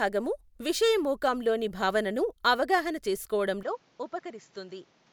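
At 3.63 s the speech abruptly turns duller and drops about 5 dB in level, with no gap, and a new noise floor appears roughly 30 dB down. Nothing above 7.6 kHz remains to the end, consistent with the input likely having switched to a poorer device.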